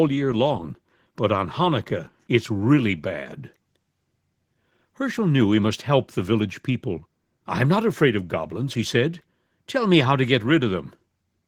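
Speech throughout, with plainly audible Opus voice compression across the whole clip: the voice comes out hoarse and slightly robotic, its excitation coarsely coded. The sound points to Opus in hybrid mode at a low bitrate, fitting roughly 16 kbps, with linear-prediction coding below 8 kHz and a thin transform layer above.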